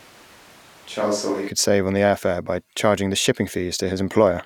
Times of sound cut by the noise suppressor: none

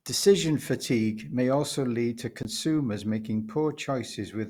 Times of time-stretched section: none

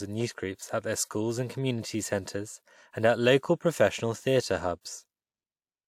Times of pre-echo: 4.81-4.85

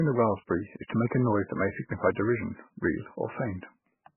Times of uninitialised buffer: none

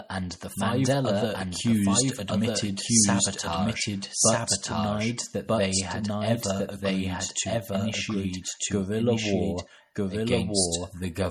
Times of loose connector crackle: none

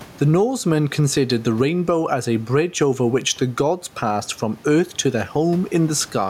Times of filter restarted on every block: none

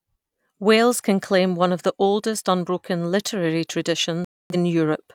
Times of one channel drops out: none

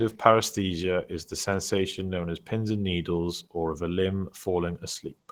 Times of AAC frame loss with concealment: none

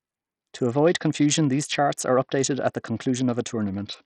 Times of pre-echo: none

